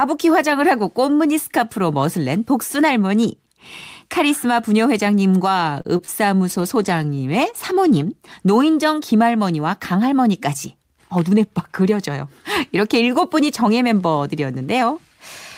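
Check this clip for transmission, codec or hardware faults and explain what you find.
Four kinds of transmission fault are audible, all network-related, clustered around 6 s and again near 11 s.

From 5.81 to 5.87 s there is a short stall from a late packet. A packet missed its playout slot and the jitter buffer ran dry, so the receiver stretched the last sound for 35 ms until the packet arrived. Nothing is lost, but the speech briefly hangs with a faint buzz or dip, and playback afterwards runs 35 ms later.

Two short concealed packet losses follow, at 5.97 to 6.01 s and 6.05 to 6.10 s. Each time about 20 ms of audio never reached the decoder, and the receiver extrapolated from the preceding sound before blending back. Each gap is heard as a quick smear or wobble in the speech.

From 6.52 to 7.98 s comes a call bitrate drop. The bandwidth estimate fell and the encoder was pushed to roughly half its rate, which fits a drop from 32 to 16 kbps, held at its lowest for about 1.4 s. 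The coarser coding makes the speech rougher and duller until the rate recovers.

From 11.16 to 11.45 s a jitter buffer speed-up occurs. The buffer held more audio than its target, so the receiver trimmed short pitch-period slices, around 40 ms in total, playing at 112% speed. The speech sounds briefly hurried while its pitch stays the same.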